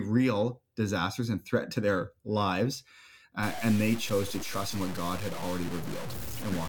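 From 3.43 s, after "threat to their lives", the speech turns grainy until the end. This is low bit depth without dither, likely from truncation to about 5 bits. The rounding error tracks the signal, roughly 10 dB down. Quiet passages turn gritty.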